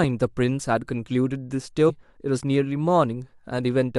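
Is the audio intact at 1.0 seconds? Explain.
Yes, the audio is intact at 1.0 seconds, with no fault audible at that moment.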